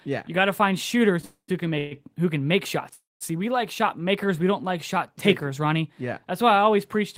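Call audio freezes at 1.25 to 1.50 s after "got to find shooters", 1.78 to 1.93 s after "find shooters who can", and 2.93 to 3.23 s after "who can make": the last sound stretches into a fading buzz, falling silent for about 0.1 s in the first and 0.19 s in the third. Delayed packets likely emptied the jitter buffer, so the speech resumes late but nothing is lost.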